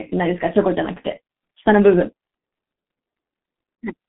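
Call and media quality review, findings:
Muffled, hoarse speech, consonants smeared, whole clip. Nothing above about 3.8 kHz; line band roughly 200 Hz to 3.6 kHz. Probable component: G.723.1 codec, heavy damage. Long 30 ms frames, coarse slow-updating voice model; sound fits about 6.3 kbit/s.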